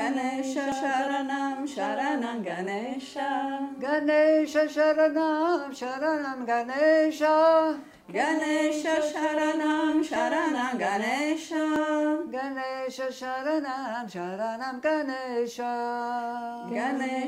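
The audio skips forward abruptly at 0.72 s, 10.16 s and 11.76 s with no gap of silence, most likely from a dropped buffer (overrun), where unread samples were overwritten. Roughly 20 ms goes missing at the first point and about 10 ms at each of the others.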